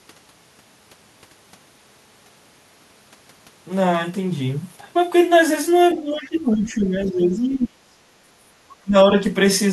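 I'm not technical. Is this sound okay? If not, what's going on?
No. From 5.89 to 6.01 s and briefly at 6.52 s, faint scraps of the other side's voice leak through, likely leftover loudspeaker echo the device failed to cancel.

From 5.95 to 7.95 s and 8.81 to 9.18 s, speech is suppressed in double talk: the talker's voice drops sharply, likely because the canceller turned down both overlapping sides.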